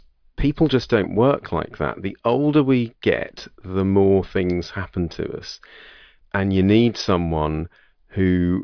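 Nothing stood out as a technical fault on listening to this speech recording.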